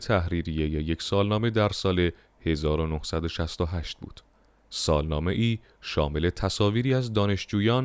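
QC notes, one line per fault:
No faults found in this speech clip. Nothing needs flagging.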